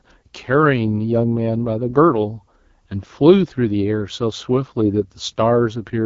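From start to end the speech carries AMR wideband (HD Voice) codec damage, and it is plainly audible. At 8.85 kbit/s, one of the lowest rates, the model of pulses and vocal tract has too few bits, so the voice sounds rough and raspy. Above about 6.4 kHz the codec fills the band with shaped noise instead of real detail. On a spectrogram the energy stops at about 7.5 kHz, and the top band looks smeared and noise-like.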